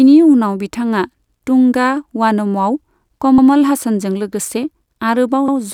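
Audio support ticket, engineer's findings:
Overlapping chunks in speech. Stutter at 1.28–1.38 s, between "उनाव बिथाङा" and "तुंगा वानमआव". Again at 3.38–3.48 s, just before "हासानजों लोगोसे". Again at 5.48–5.58 s. Each join replays 100 ms of audio, spaced 2.1 s apart: 2 s chunks, each starting 100 ms before the previous ended. Probable component: chunking/buffer stage in the processing or transport path. Waveform: 100 ms segment visibly duplicated, step discontinuity at the splice. Spectrogram: repeated harmonic pattern plus a thin vertical broadband line at each join.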